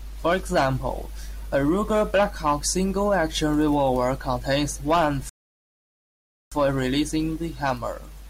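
A rebuffering stall in this speech clip: the player ran dry after "revolver contains one" and went silent from 5.29 to 6.52 s, resuming exactly there, adding 1.22 s.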